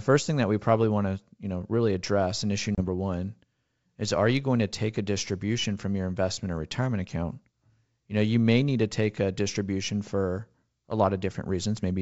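At 2.75 s, just after "really address in issue", packet loss on an ADPCM call cuts a hard-edged 30 ms silent gap, roughly a few packets. Until 2.81 s the speech returns slightly distorted as the decoder's predictor and step size resynchronise with the sender. The surrounding G.722 wideband coding at 64 kbit/s stays clear.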